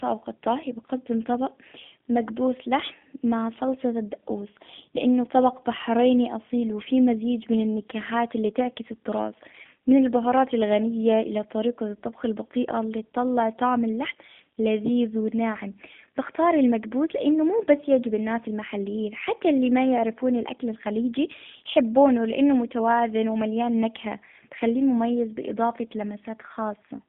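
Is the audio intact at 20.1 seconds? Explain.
No. At 20.1 seconds the speech carries G.729 codec damage, present from start to finish. The codec rebuilds each 10 ms frame from a vocal tract filter, a pitch estimate and a few pulses, which fits an 8 kbit/s stream. The band runs only from about 150 Hz to 3.5 kHz, so the speech sounds narrow and muffled. The coarse rebuilding is plainly audible as a rough, buzzy, synthetic edge.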